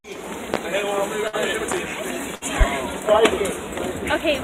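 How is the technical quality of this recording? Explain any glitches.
The recording has two kinds of glitch, each happening twice.

There's a loud pop at 0.54 s, a single sharp click well above the audio, and a double pop from 1.72 to 1.80 s. Both are likely a voltage spike from a plug, switch or static hitting the line, while the sound carries on underneath.

There are also two bursts of packet loss, at 1.27 to 1.36 s and 2.35 to 2.44 s. The receiver stretches the last sound into a fading buzz or hiss for about 55 and 63 ms. Then it jumps ahead, skipping about 60 ms of audio each time.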